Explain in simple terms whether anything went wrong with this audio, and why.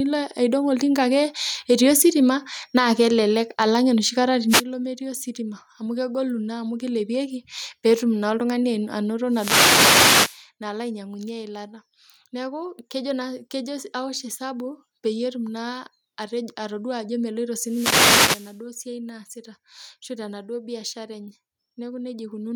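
Throughout the speech, the level gets pulled down on every loud sound, so loud and soft parts end up close together and the voice sounds squashed. That's gain pumping, likely from the microphone level being set far too high, so an automatic limiter keeps yanking it down.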